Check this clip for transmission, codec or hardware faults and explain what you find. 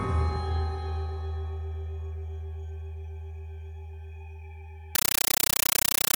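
One fault: from 4.95 s to the end, a compressed stream is played as audio, as AC-3 data treated as samples. Spectrogram shows broadband noise bursts of about 9.3 ms, 31.25 times a second, heard as loud chattering static.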